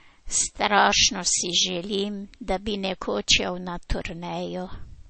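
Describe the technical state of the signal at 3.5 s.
At 3.5 s the speech carries a fault that runs through the whole clip: low-bitrate audio saved at a high bitrate. It was likely first squeezed through a low-bitrate MP3 encoder and later re-encoded at a much higher rate, which cannot restore what the first pass discarded. Nothing sounds above about 8.4 kHz, so the top end is dull and airless, and the first encoder's artefacts remain, barely touched by the second.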